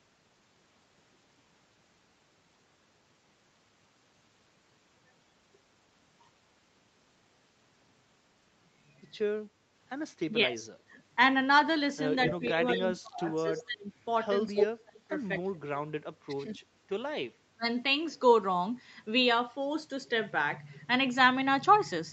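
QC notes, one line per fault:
10.27–10.66 s, 12.29–13.92 s, 14.52–15.62 s, 16.27–16.49 s, 17.38–17.65 s: speech suppressed in double talk. The speech level sags in each window, then recovers. The shallowest dip is about 10 dB, at 10.27 s. The deepest reach about 30 dB, at 14.52 s and 17.38 s, where pieces of speech almost vanish. The longest run, 12.29–13.92 s, chops the speech for about a second. The likely cause is an echo canceller that heard both ends talking at once. It could not tell local speech from loudspeaker echo, so it attenuated everything.
12.28–12.99 s, 13.58–13.63 s, 14.56–14.66 s: echo leak. A repeat of the speech trails the original by 235 ms each time. It sits roughly 5 to 15 dB under the direct speech. It is loudest near 14.6 s, briefest at 13.6 s. They overlap the suppression windows, where the canceller was struggling. Most likely, loudspeaker sound on one side reached that side's microphone and was not fully cancelled before being sent back.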